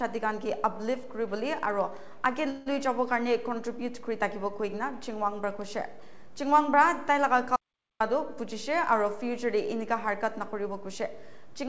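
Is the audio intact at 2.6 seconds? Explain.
No. A call audio freeze runs from 2.50 to 2.68 s, likely a jitter-buffer underrun: the last sound is stretched into a fading buzz or hiss, visible as smeared, flattened spectral bands.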